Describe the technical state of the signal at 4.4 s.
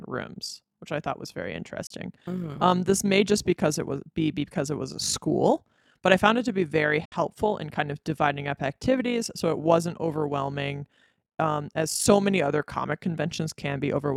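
At 4.4 s the speech carries overlap-add ripple, and it's there across the whole clip, not just at that moment. The audio was split into windowed frames and stitched back together with an overlap that doesn't add up to a steady gain, so the level dips and swells by about 6 dB once per frame, around 50 times a second. You hear it as a fast, buzzy flutter, a sort of robotic tremolo riding on everything.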